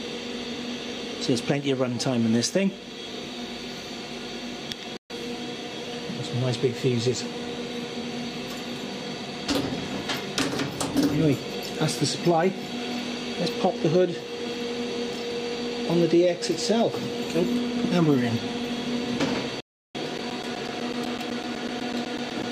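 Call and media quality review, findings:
Digital broadcast dropout, 4.97 to 5.13 s: audio mutes for about 128 ms with a 3 ms fade either side, then returns. Consistent with a few consecutive frames failing checksum at the receiver, which mutes until good frames resume.

Digital broadcast dropout, 19.60 to 19.99 s: same signature, longer, about 341 ms silent, fitting a longer run of lost frames. Unlike driver dropouts, these are isolated, long holes with soft fades rather than a regular tick train.

Periodic USB or driver dropouts, 20.18 to 22.43 s: regular ticks every 0.125 s, around twenty in all, each roughly 10 ms of silence cut into the signal. Probable cause is a background task stalling the USB bus or audio driver on a fixed schedule. Distinguished from the broadcast dropouts by the strict even spacing and very short gaps, heard as clicks, not as muted stretches.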